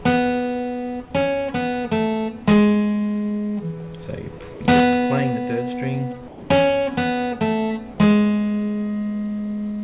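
At 4.54 s the sound gives way to steady noise or near silence for 60 ms, then again at 6.28 s for 220 ms, with 40 and 80 ms of real sound gone. That's likely sound dropped by the voice detector, with comfort noise filling the gaps. The empty band above 4 kHz fits a G.711 call path.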